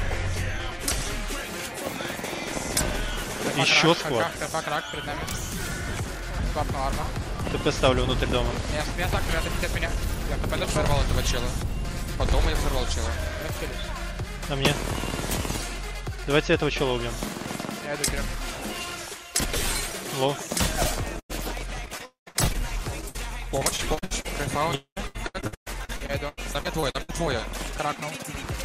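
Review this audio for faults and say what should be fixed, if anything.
Repeated packet loss (robotic sound) runs from 21.19 to 24.26 s and again from 24.98 to 27.11 s. Short holes keep appearing, each patched by stretching the preceding sound, which gives a choppy texture. The first stretch has gaps up to 99 ms, with about 16% of it filled in. The second is denser, with gaps up to 120 ms and about a third filled. Unlike a single dropout, the damage is many brief repeats close together. Better jitter buffering and forward error correction on the link would prevent it.

Two long network dropouts are heard at 22.05 to 22.28 s and at 24.75 to 24.98 s. Each time, about 0.22 s of audio is missing. The last sound carries on as a fading buzz or hiss and then falls to silence, for about 130 ms in the first and 110 ms in the second, before the audio resumes without the lost part. What sets these apart from the robotic stretches is one sustained hole followed by true silence, rather than rapid choppy patching. 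The likely cause is a brief complete interruption of the network path. A more stable connection, with redundancy or retransmission, would prevent it.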